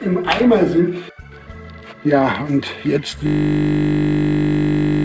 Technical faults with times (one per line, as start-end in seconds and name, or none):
0.00-5.04 clock drift between sender and receiver
0.20-2.95 repeated timing corrections
3.27-5.04 system hang loop